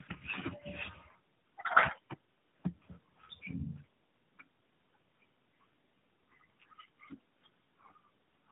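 Tandem speech coding runs throughout the clip. The speech sounds like it has been squeezed through two low-rate speech coders in a row, most likely a GSM full-rate stage and then AMR-NB at around 12.2 kbit/s, with a G.711 link between them. Each coder re-models the errors left by the one before, so the damage compounds. The result is rough, muffled and warbly, with nothing above 3.8 kHz.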